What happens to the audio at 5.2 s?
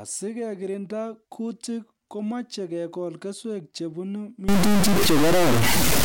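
A data bit has likely stuck at a fixed value, a stuck bit. From 4.49 s, right after "komeche kekol keswek chebunu", to the end at 6.05 s, about half the samples are offset by roughly 15 dB below full scale, giving harsh, buzzy distortion and noisy gaps.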